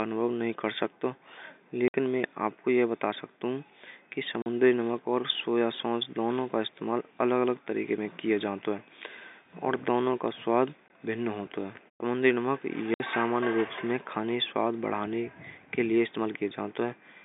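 Packet loss filled with silence breaks the speech at 1.88–1.94 s, 4.42–4.46 s, 10.88–10.90 s and 12.94–13.00 s. The receiver substituted silence for missing packets, leaving abrupt 60, 40, 20 and 60 ms holes, steps that point to 20 ms packets, each with hard edges.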